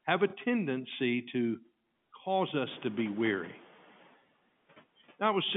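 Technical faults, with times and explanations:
0.30–0.33 s, packet loss with last packet repeated: Just after "have a", about 30 ms of audio goes missing, which fits a single lost 30 ms packet. The receiver fills the gap by playing the previous packet again. The copied stretch doesn't match the pitch cycle where it joins the real signal, which makes a small blip. Because the gap is only one packet long, it is heard as a single hiccup, not a sustained buzz.
2.67–3.68 s, noise suppressor catching up: Room noise rises sharply, by about 17 dB, at around 2.5 s. Right after "to cause", the suppressor is still working from its older, quieter noise estimate, so the new noise passes through with little reduction. Over roughly one second the estimate adapts and the background sinks by about 5 dB. The result is an audible swell of noise that then fades down under the telephone-band sound, which ends near 3.5 kHz.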